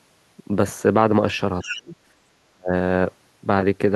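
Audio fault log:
1.62 to 1.82 s, other side's voice leaking through: a second voice sits roughly 10 dB under the talker, likely loudspeaker echo the echo canceller didn't fully remove.
1.63 to 1.96 s and 2.53 to 2.73 s, speech suppressed in double talk: the talker drops by up to around 40 dB, likely the canceller ducking everything while both sides spoke.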